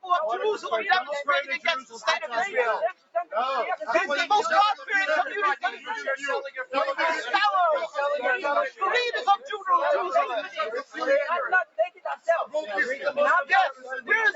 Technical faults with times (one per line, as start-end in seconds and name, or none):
0.00-14.36 noise suppressor applied to music or sounds
1.82-2.02 sound cut by the noise suppressor
2.92-3.34 sound cut by the noise suppressor
4.75-4.90 sound cut by the noise suppressor
5.64-5.89 sound cut by the noise suppressor
6.47-6.74 sound cut by the noise suppressor
10.83-11.00 sound cut by the noise suppressor
11.65-12.28 sound cut by the noise suppressor
13.73-14.10 sound cut by the noise suppressor